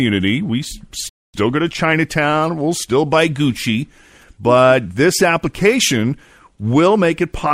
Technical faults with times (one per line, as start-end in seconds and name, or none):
1.09-1.34 rebuffering stall